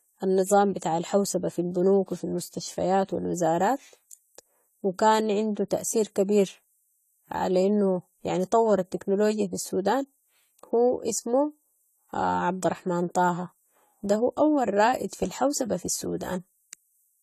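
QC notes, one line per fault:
Throughout, AAC compression: the speech sounds dull and smeared, with a watery, fizzy edge on sibilants and held vowels, and there's nothing at all above 14 kHz. That's most likely a low-bitrate AAC-LC encode. The encoder runs short of bits, so it cuts the top band entirely and coarsely quantises what's left, leaving gaps that swirl from frame to frame. The damage is plainly audible and fits something around 32 kbps.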